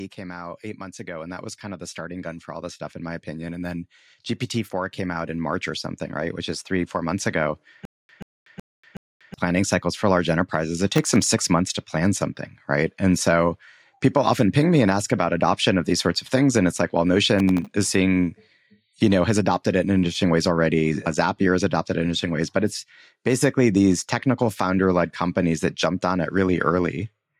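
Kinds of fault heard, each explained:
Automatic gain rising: The level control judged the input too quiet and pushed its gain up gradually, so the speech and the background swell together instead of the voice alone getting louder. It happens twice, from 0.16 to 3.95 s and again from 4.71 to 10.12 s, each a rise of about 8 dB. The second swell settles just before "large enterprises it". The slow, even climb is what identifies it.
Stutter with silent gaps: Between 7.85 and 9.34 s, the same 133 ms fragment of speech plays four times at a steady 372 ms period, with about 239 ms of dead digital silence after each repeat. The pattern points to a stalled player or stream that likely kept replaying its last fragment on each retry and then ran empty. The speech that should have filled that span never arrives.
Processor overload crackle: When the processor misses its deadline for a run of tiny audio buffers, each miss leaves a gap with hard edges, and together they form a gritty burst of crackle. 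Here the gaps are silent, and their spacing points to buffers about 0.7 ms long. Bursts occur from 10.95 to 11.29 s, between "large enterprises it" and "months to plan something", and from 17.39 to 17.74 s, between "it's like well" and "is seeing".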